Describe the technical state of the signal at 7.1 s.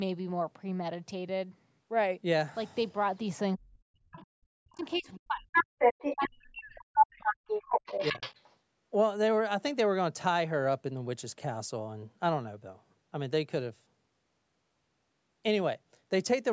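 At 7.1 s the echo canceller has most likely run into double talk: with both ends talking at once, it cannot tell the local talker from the loudspeaker echo and attenuates the whole microphone signal. This is speech suppressed in double talk, running from 6.17 to 7.24 s. The speech here sounds dipped and thinned, with the deepest gain reduction around 40 dB, and about a second of the stretch is affected.

Just before this moment, from 6.79 to 7.05 s, the other side's voice leaks through. The canceller, likely overwhelmed by the same double talk, failed to strip the loudspeaker pickup from the microphone. That second voice comes through as a short scrap sitting slightly above the local speech in level, so for roughly a quarter of a second the far talker is more prominent than the near one. At 7.1 s it has just stopped, while the suppression continues until 7.24 s.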